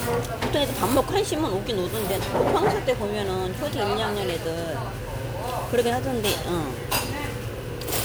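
Everyday sounds with generation loss throughout: likely about five successive MP3 encodes, fitting a 128 kbit/s chain, which stack up into a swirly, hollow texture with blurred attacks.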